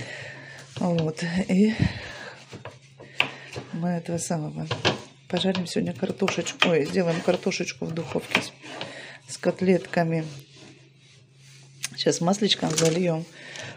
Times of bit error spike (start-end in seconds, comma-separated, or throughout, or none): 10.39